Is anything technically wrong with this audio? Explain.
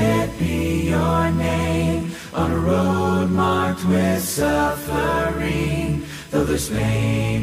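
Yes. A USB whine runs through the whole clip: a steady, fixed-pitch tone at 1 kHz, sitting roughly 30 dB below the sound. The 1 ms USB frame rhythm modulates supply current, and that ripple couples into the audio path through shared power or ground.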